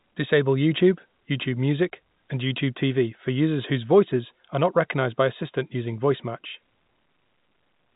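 No technical faults are audible.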